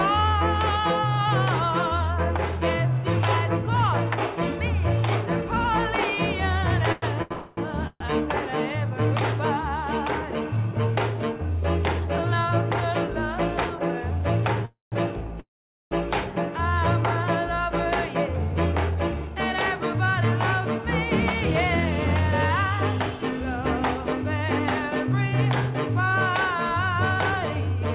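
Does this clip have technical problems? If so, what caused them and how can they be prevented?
Yes. Repeated stalls (stutter) occur from 6.92 to 8.02 s. Packets arrived late or slower than playback, so the jitter buffer emptied three times, the longest gap lasting 132 ms. The receiver stretched the last sound to fill 316 ms, about 29% of that stretch, and nothing is lost, but the audio drags and stutters. Keeping the network path steady and giving the jitter buffer a little more headroom prevents this.

Call audio freezes occur at 7.32 to 7.59 s, 14.65 to 14.94 s and 15.40 to 15.93 s. Each time, the last sound continues and fades, which adds 247, 267 and 513 ms. The second includes 160 ms of silence and the third 450 ms. Playback then resumes where it stopped. The likely cause is packets held up in transit that drained the jitter buffer. Reducing congestion and prioritising call traffic prevents this.

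Jitter buffer speed-up runs from 18.08 to 20.79 s at 104% speed and from 22.71 to 27.77 s at 103%. After the delays built up, the receiver cut out tiny pitch-period slices, roughly 150 ms and 200 ms in total, so the audio runs faster at unchanged pitch. Avoiding the delay spikes that fill the buffer prevents this catch-up.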